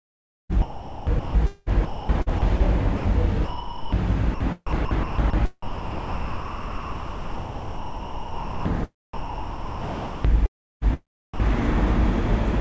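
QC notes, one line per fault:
0.52–11.40 s, sound chopped by the voice detector: the everyday sound keeps cutting in and out, with about 6.6 s of it in total swapped for comfort noise. The likely cause is a sender-side voice detector repeatedly switching transmission off and filling the gaps with comfort noise, heard over a call-codec path with nothing above 8 kHz.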